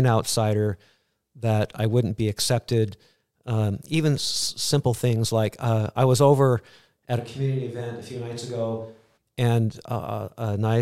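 Right after "was over at a", at 7.21 s, the sound abruptly turns roomy and hollow, loses bass and drops about 10 dB, with faint background noise creeping in. That's a switch to a distant microphone, likely the close mic dropping out, and it snaps back at 9.16 s.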